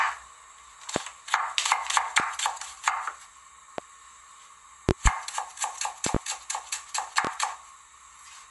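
An everyday sound recording with loud pops at 0.96–1.00, 2.20–2.24, 3.78–3.82, 4.89–5.09 (a double pop), 6.06–6.18 (a double pop) and 7.25–7.29 s. They peak about 20 to 25 dB above the sound, which continues beneath them. Likely sudden voltage steps, such as a switch or static. Throughout, there is a watery, smeared quality, and nothing is heard above 11.3 kHz. That is plainly audible MP3 compression, likely at a low bitrate near 48 kbps.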